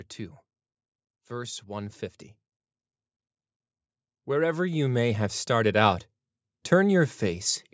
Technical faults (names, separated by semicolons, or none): automatic gain rising